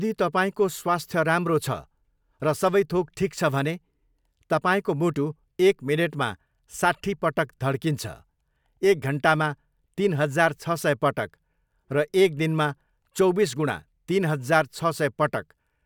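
No technical faults detected anywhere in the speech recording.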